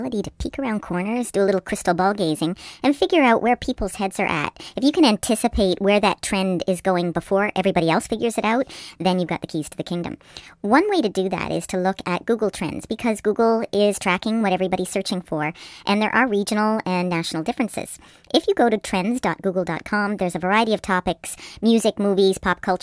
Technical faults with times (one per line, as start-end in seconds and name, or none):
0.00-22.82 wrong sample rate